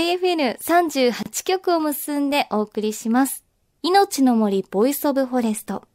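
At 1.23 s the speech drops out for 31 ms, resuming at 1.26 s: a gap at a join of encoded pieces. Segments about 6 s long were encoded separately and joined untrimmed, so start delay and final-frame padding leave a silence with smeared edges.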